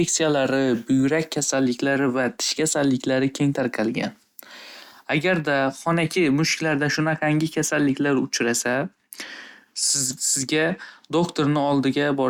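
No technical faults are audible.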